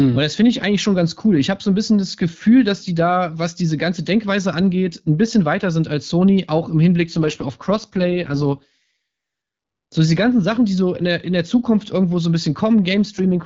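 From 7.11 to 8.96 s, and again from 13.05 s to the end, the speech turns rougher and more synthetic. This is an AMR rate drop: the link forces the AMR-WB encoder down to its lowest mode, which fits a step from 12.65 to 6.6 kbit/s, and the coarse excitation model starts to rasp. On a spectrogram the band still reaches about 7 kHz with no gap, but the harmonics smear into grainy noise. The waveform stays continuous.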